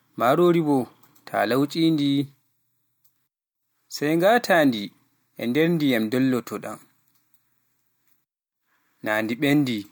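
Listening through the speech, nothing stood out at any point.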